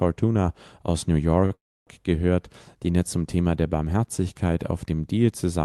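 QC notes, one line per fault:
1.45–1.53 s, short stall from a late packet: just before "gehört den er zum" the current sound is held for about 52 ms as a faintly buzzy sustain, then continues from exactly where it left off. The jitter buffer briefly ran dry and the receiver stretched the last sound to cover the wait. Unlike a freeze, it never fades toward silence. Unlike a dropout, no speech is skipped. The clip is simply running 52 ms later from here.
1.55–1.89 s, call audio freeze: only 20 ms after the stall, the audio stops again for about 321 ms. The last sound carries on as a short fading buzz, then about 300 ms of near silence follows. Speech resumes with "gehört den er zum" from the point where it stopped, so a gap has been inserted but nothing is lost. The likely cause is packets held up in transit and the jitter buffer emptying completely. This event is much longer than the stall before it and mostly silent, so it doesn't read as a held sound. 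Both events sit on top of the Opus call path, whose high-frequency limit around 12 kHz shapes the fill.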